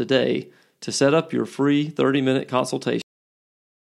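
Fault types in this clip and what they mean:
Cut-off end: the speech stops abruptly at about 3.02 s, in the middle of a sound, and the last 0.89 s of the clip is flat digital silence. The final stretch of audio was never written out or played, so nothing decays or rings on. On the waveform the signal ends in a sheer vertical edge and then a flat silent line. On a spectrogram the energy ends in a hard vertical boundary, followed by a blank area.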